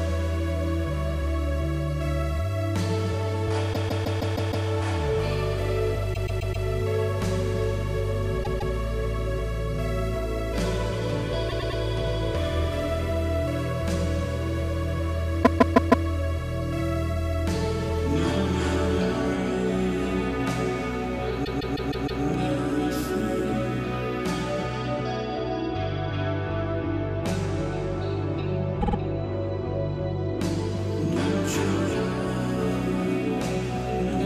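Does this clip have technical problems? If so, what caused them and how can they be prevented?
Yes: repeated frames at 3.72–4.66, 6.13–6.65, 8.43–8.74, 11.48–11.80, 15.43–16.05, 21.44–22.22 and 28.80–28.96 s. Runs of compressed frames were delivered more than once, so blocks of about 50 to 160 ms replay up to six times as a stutter. Unlike a dropout, nothing goes missing, and each stutter adds its own length, up to about 0.94 s, to the running time. Preventing it means checking sequence numbers or timestamps when writing or receiving the stream so that duplicate frames are discarded before decoding.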